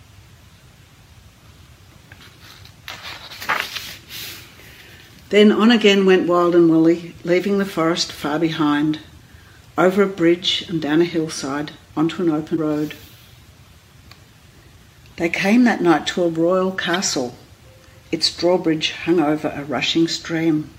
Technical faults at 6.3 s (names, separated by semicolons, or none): none